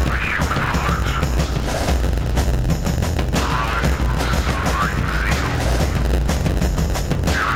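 A block size mismatch (padded) runs through the whole of this music clip. One stage delivers blocks slightly shorter than the next stage collects, and the shortfall in each block is filled with silence. Those tiny gaps recur about 92 times a second, producing a steady buzz at 91.9 Hz under the music. The inserted silence stretches the timeline, so the music plays at 0.919 times its proper speed while keeping roughly its normal pitch.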